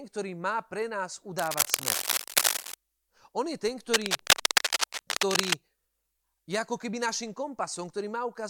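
From 1.38 to 2.74 s, right after "má pre nás", a burst of cable scratch noise covers the speech. It returns from 3.94 to 5.53 s, after "je ten". Both bursts are dense and uneven, heard as harsh scratching and rustling. They sit a little louder than the speech itself. The likely cause is a worn cable or connector being moved, so its contact resistance jumps about rapidly and injects noise.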